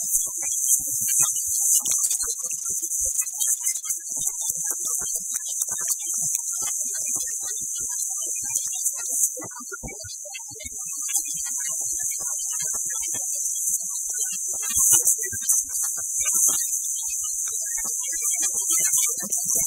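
From 2.05 to 3.84 s, repeated packet loss (robotic sound): twenty short dropouts, longest 41 ms, patched by repeating prior audio, giving a choppy sound rather than one clean gap.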